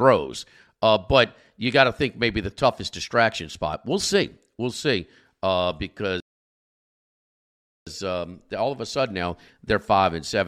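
At 6.20 s the player ran out of downloaded audio, a rebuffering stall: the speech drops to silence until 7.87 s, then resumes intact at "um all of a", adding 1.66 s.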